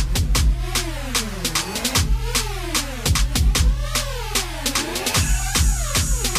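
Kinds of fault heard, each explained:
No kinds of fault are heard in this clip.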